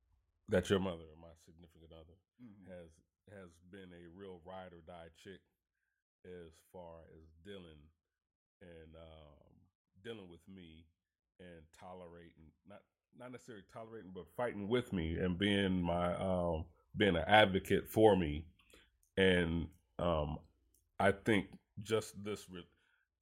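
Zipper noise from 0.73 to 1.09 s: the speech drops about 20 dB in unsmoothed steps, roughly two hundred a second, each adding a tiny click that buzzes under the fade.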